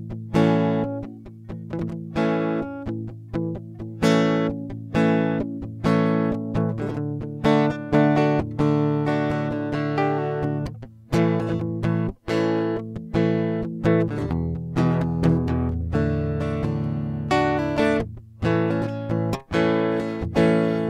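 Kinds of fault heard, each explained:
Compressed frames skipped: the music jumps ahead at 6.90 s, 12.96–12.98 s and 18.86 s. Whole 23.2 ms frames go unplayed: about two (roughly 50 ms) twice, then about five (roughly 100 ms).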